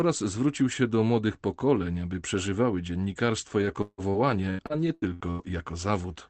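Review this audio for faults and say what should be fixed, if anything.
From 3.58 to 5.50 s, right after "pokoleń aby przeżywały dziennikarstwo", there's repeated packet loss (robotic sound): eight dropouts, the longest 162 ms, each patched by stretching the last sound. That leaves roughly half a second of choppy fill over a quarter of that stretch. To prevent it, give the call more jitter-buffer headroom and turn on forward error correction for this call-codec path, which is band-limited to about 8 kHz.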